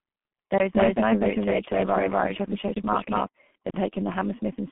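From the first moment to the last, the speech carries the sound of a G.723.1 codec, and it's pretty heavily mangled. Nothing gets through above 3.7 kHz, and the line band sits roughly between 150 Hz and 3.4 kHz, so everything comes across muffled and a bit hoarse. The consonants smear together because the coder works in long frames and its model of the voice lags behind quick changes. The thinness fits a very low bitrate, somewhere around 6 kbit/s.

At 0.75 s a doubled audio track cuts in abruptly and stays until 3.27 s, where it drops out just as suddenly. A second full-band copy of the same speech trails the original by around a fifth of a second, at about the same loudness. It has no reverb tail or room colour, so it sounds like a clean, flat repeat rather than an echo off walls. The likely cause is the signal being picked up a second time through a slower path and summed back in.

Inside that doubled stretch, from 2.74 to 2.76 s, there's a block of digital silence lasting 20 ms. 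The audio drops straight to silence and comes straight back with no fade, leaving a tiny hole. That's the signature of an output buffer that wasn't filled in time, or of samples zeroed out after an invalid calculation.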